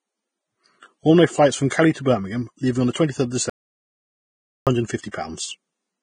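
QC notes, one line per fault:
Throughout, Vorbis compression: the treble is rough and hissy, with nothing above about 9.7 kHz, and attacks sound blurred. That likely comes from heavy Vorbis coding, where the fine detail up top gets quantised into noise. The amount of damage fits a low bitrate of roughly 23 kbps.
3.50 to 4.67 s, audio dropout to silence: the speech cuts out for about 1.17 s into dead digital silence, with no room tone at all. It's likely the input signal was lost while silence kept getting written, so whatever was said during that gap is gone.
5.11 to 5.14 s, pre-echo: a hiss of about 25 ms leads into a sharp attack, which then lands soft and smeared. The codec's quantisation noise is spread across the whole block, so it seeps into the quiet stretch just before the onset.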